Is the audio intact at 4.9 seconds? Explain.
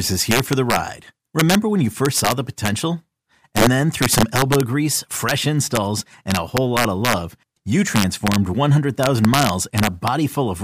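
No, not really. Integer overflow runs through the whole clip, so 4.9 s is affected too. The speech seems pushed about 5 dB past the integer limit, and instead of being held at the ceiling, the loudest peaks wrap around to the opposite sign, jumping across the full range. Only a tiny fraction of samples, well under one percent, go over, but each one comes through as a harsh, violent crack on louder moments, much nastier than ordinary clipping.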